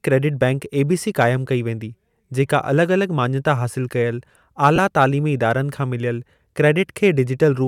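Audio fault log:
4.76–4.78 s, lost LE Audio frames: just after "अलॻि माञता हासिल कयल" the speech smears into brief noise, about 20 ms, fitting two dropped frames concealed by replaying the last spectrum with random signs.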